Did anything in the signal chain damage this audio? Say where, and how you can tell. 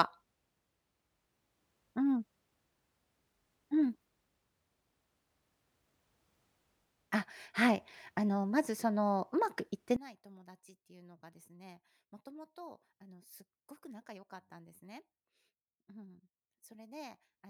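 Yes. From 9.96 s to 17.49 s, one channel is inverted, likely from a polarity-reversed conductor in the analogue wiring. When the channels are summed to mono, the centred speech cancels, falling by about 22 dB and leaving only a faint residue of what differs between channels.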